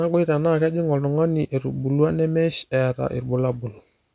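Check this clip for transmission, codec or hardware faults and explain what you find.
No transmission, codec or hardware faults can be heard anywhere in the speech, so the signal arrives intact, with no defect to trace to the channel, the encoding or the equipment.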